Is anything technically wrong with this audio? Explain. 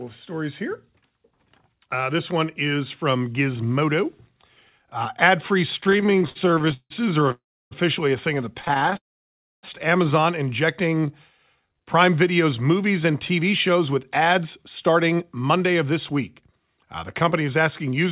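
Yes, there are several network-timing problems, all heard through a narrowband call path (G.711 mu-law) that keeps nothing above 4 kHz.

Repeated stalls (stutter), 5.78 to 7.32 s and 8.59 to 8.97 s: packets kept arriving late, so the jitter buffer kept running dry and the receiver stretched the last sound each time. About a third of each span is filler: 29 hiccups in the first, up to 164 ms long, and 12 short ones in the second, up to 15 ms. Nothing is lost, but it drags and stutters.

Call audio freeze, 7.32 to 7.73 s, just before "a thing of the", and 8.97 to 9.65 s, right after "a thing of the": the audio stops dead for 0.39 s and then 0.66 s, mostly silence. The likely cause is packets held up in transit, leaving the buffer empty until playback resumes where it stopped.

Jitter buffer slow-down, 10.89 to 11.08 s and 11.56 to 11.97 s: the buffer was low, so it repeated single pitch periods to rebuild its reserve. 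Playback drops to 80% and then 85% speed at unchanged pitch, adding 45 ms and 68 ms of drawn-out sound.

Jitter buffer speed-up, 13.4 to 14.4 s and 14.88 to 18.05 s, ending just before "to pay": with too much audio queued, the receiver snipped out tiny pitch-period slices to cut latency. The sound runs at 105% and then 107% speed, with roughly 50 ms and 200 ms trimmed, so it feels hurried.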